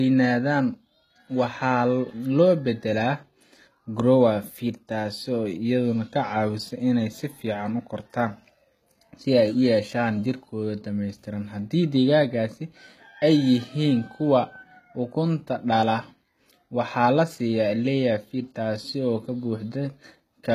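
Throughout the recording, the speech was likely encoded first by a very low-bitrate codec and later saved again at a high bitrate, the kind of chain where a file around 20 kbit/s HE-AAC becomes a 320 kbit/s MP3. The larger second encoding cannot restore what the first discarded, so the earlier damage stays audible. Nothing is present above 14.9 kHz, leaving the top of the spectrum empty and the speech dull and lacking air.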